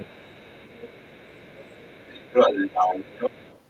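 Speech suppressed in double talk occurs from 0 to 0.05 s. The opening instant of speech dips by roughly 10 dB, likely because the echo canceller, faced with both sides talking at once, could not tell the talker from loudspeaker echo and attenuated everything.

Other side's voice leaking through persists throughout the clip. A second talker is audible at about the same level as the main speech, likely because the echo canceller left the far end's loudspeaker playback in the microphone signal rather than removing it.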